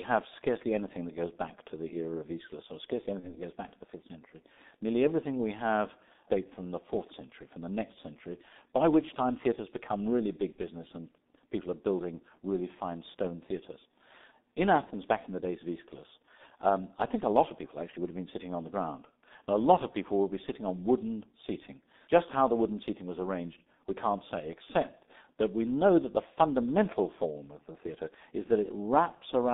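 From the start, the whole clip runs through the G.723.1 codec at what sounds like its 6.3 kbit/s rate, squeezed into a 200 Hz to 3.7 kHz band. It's muffled and hoarse, with smeared consonants from its slow 30 ms frame updates.

Then there's VoIP packet loss concealed by the speech codec: after "or scarcely" at 3.20 to 3.36 s, after "time theatres become really" at 10.52 to 10.56 s, and before "back in the days" at 14.84 to 14.92 s. Each gap fits one lost 30 ms frame that the decoder filled by stretching its last pitch and filter into a brief, fading smear. At 3.2 s the speech stays rough a little past the gap.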